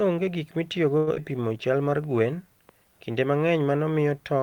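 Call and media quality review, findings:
Short stall from a late packet, 0.97–1.09 s. Speech holds on one sound for about 97 ms, then resumes exactly where it left off with nothing lost. The jitter buffer underran, and the receiver's concealment stretched the last frame until the packet landed, adding 97 ms of delay. On a spectrogram, the harmonics run flat and smeared across the gap with slight energy ripple. The waveform shows a repeated cycle shape with a faint dip.

Skip ahead, 1.15–1.18 s. Playback jumps forward, dropping around 70 ms of speech and splicing the two sides almost directly, with only a brief fill. The jitter buffer likely discarded queued audio to shed latency, cutting delay by roughly 50 ms right after the stall. On the spectrogram, formant tracks break abruptly with a vertical seam. The waveform shows a sudden envelope or phase discontinuity.

Jitter buffer slow-down, 1.21–1.54 s. 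Speech runs at 86% speed with pitch unchanged and sounds drawn out. The buffer was rebuilding its reserve after the skip by repeating pitch periods, adding 55 ms in total. On the spectrogram, the harmonics keep their spacing but syllables stretch horizontally, with slight periodic irregularity. The waveform shows near-identical consecutive cycles duplicated in runs.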